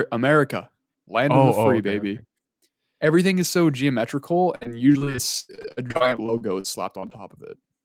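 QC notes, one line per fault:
4.55–7.20 s, repeated packet loss (robotic sound): starting right after "is so geometrical", the speech breaks up into 22 short gaps, the longest about 91 ms. Nearly all of the roughly 0.6 s of missing audio is patched by stretching the preceding sound forward, so about a quarter of this span is filled-in material rather than real signal. Hole after hole in quick succession gives the choppy, robotic texture, with fragments of speech lost.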